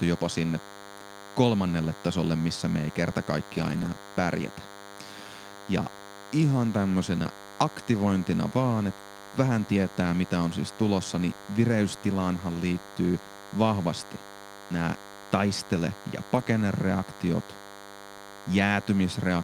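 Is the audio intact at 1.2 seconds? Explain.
No, at 1.2 seconds the speech is sitting on top of DECT cordless phone buzz, and that buzz runs the whole way through the clip. A DECT handset or base close by fires a short radio burst every 10 ms, and something in the audio chain rectifies it, so you get a thin, steady 100 Hz buzz full of harmonics. It's roughly 20 dB under the speech.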